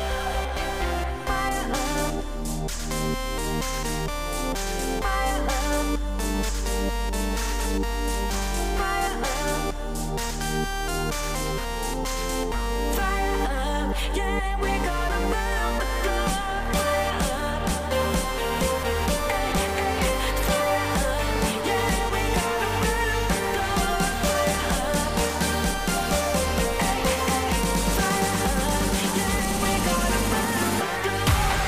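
No technical faults can be heard anywhere in this audio.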